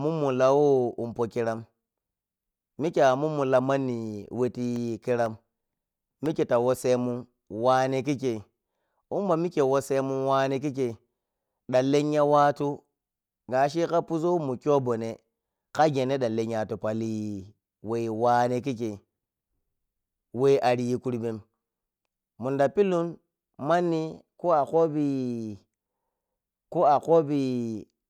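A speech clip with periodic USB or driver dropouts from 4.26 to 7.26 s, after "a mummu la manni" and before "wane kikkei". Every 0.5 s, about a millisecond of audio drops to silence. A briefly blocked bus or driver causes these regular ticks.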